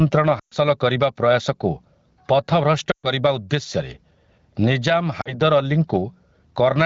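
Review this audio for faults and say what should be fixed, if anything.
Gain pumping runs through the whole clip. The level gets yanked down as soon as the talker gets loud, with a swing of about 15 dB. That gives the speech a squashed, breathing feel. The likely cause is input gain set way too hot, with a fast limiter or compressor clamping each loud syllable and letting go in the gaps. To prevent it, drop the mic gain so peaks land well below the limiter and it rarely has to engage.

There are lost AMR speech frames at 0.39 to 0.54 s, 2.91 to 3.10 s and 5.21 to 5.34 s. The first two gaps are about 120 ms each, and they sound like the decoder dropping the voice to near silence within a couple of frames before the voice comes back thin for a moment. The third, about 40 ms, is a brief drop toward silence. The lengths fit runs of six and two 20 ms frames failing their checks over a noisy radio link, with the concealment repeating old pitch and tract settings at falling gain. 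The underlying AMR wideband coding sounds like a mid-rate setting. Fixing this means improving the radio link, with better coverage or stronger channel protection, so fewer frames get corrupted in the first place.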